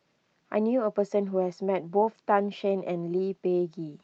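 No audible technical faults.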